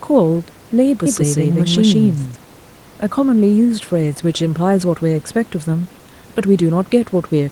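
A second, likely slower capture path mixes the speech in twice from 1.06 to 2.36 s, creating a doubled audio track: an equally loud, uncoloured copy trails by about 150 ms and cuts in and out abruptly. The room noise sits roughly 28 dB under the speech.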